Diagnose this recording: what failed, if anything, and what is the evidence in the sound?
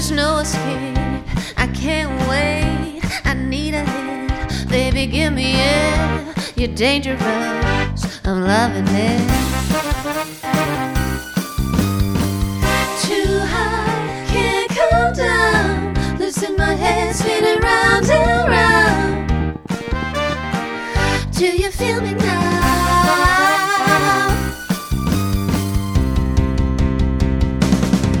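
A train of clicks runs from 16.91 to 20.33 s. The pulses come at about 13 per second, unevenly spaced, some fifty in all. They share much the same shape and stand out above the sound, peaking around 5 dB higher. They tick through quiet moments too, so they are not part of the source. The likely cause is interference from nearby equipment coupling into the analogue wiring, injecting a brief pulse each time it fires.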